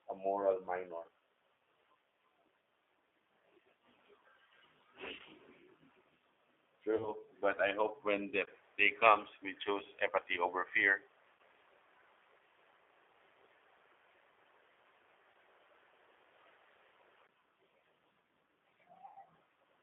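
Throughout, the speech runs through what fits an 8 kbit/s G.729 codec, which rebuilds each frame from a filter model and a few pulses inside a 300 Hz to 3.6 kHz band, so the voice sounds plainly rough, synthetic and narrow.

VoIP packet loss concealed by the speech codec hits at 1.58 s, 5.17–5.21 s, 6.96–7.12 s, 11.35–11.40 s, 15.32–15.34 s and 19.06–19.18 s. The gaps run 40, 20, 40, 40, 20 and 100 ms. Each time, the decoder stretches its last frames into a buzzy tone or coloured noise that fades, and the voice stays weak briefly afterward.

From 8.45 to 17.29 s, the input was likely switched to a poorer device. A 20 ms dropout marks the change. After it, nothing passes above 3.9 kHz, the level shifts by roughly 5 dB, and a new noise floor sits well below the speech.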